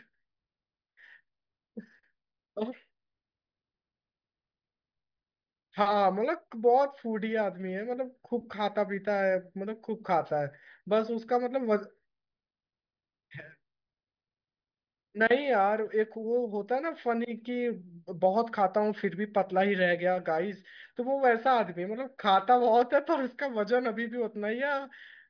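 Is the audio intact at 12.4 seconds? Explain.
Yes, the speech at 12.4 seconds plays through without any audible dropout, click, distortion or other technical fault.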